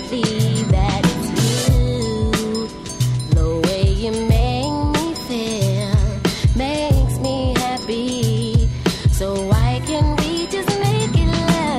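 At 7.82 s and again from 10.80 to 10.83 s there are chunks out of order. Each 10 ms block lands one, then two, slots late, so the audio jumbles briefly, with three hard joins around each swap.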